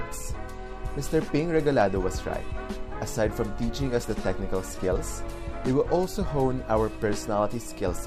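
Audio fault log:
No faults detected.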